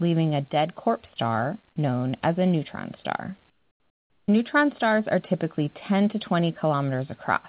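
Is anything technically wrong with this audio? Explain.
Yes, there's one problem in this speech clip. From 3.5 to 4.28 s, right after "as a neutron star", the real room background drops out for about 780 ms and a flat, featureless hiss takes its place, about 9 dB quieter. That's likely comfort noise in place of the background. The sender's voice detector decided nobody was talking and stopped transmitting, so the receiver filled the pause with synthetic noise loosely matched to the room. The real background comes back when the speech resumes. Everything stays band-limited to 4 kHz by the call codec.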